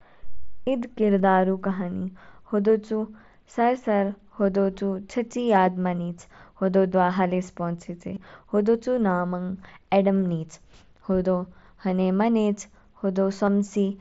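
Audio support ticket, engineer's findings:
Concealed Bluetooth headset packet loss: brief buzzy fills at 1.18 s, 8.14–8.17 s between "हलिस पोंचेचे" and "होदो चू", and 13.46 s, roughly 15, 22.5 and 15 ms, fitting two or three dropped mSBC packets patched with repeated waveform from the preceding ~20 ms.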